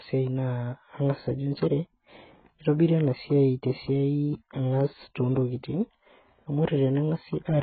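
From start to finish the speech sounds dull and smeared, with nothing above 4.6 kHz and a warbling, fizzy texture on sibilants. The likely cause is heavy AAC compression. AAC-LC starved of bits drops high bands and coarsely quantises the rest, which fits a bitrate near 12 kbps.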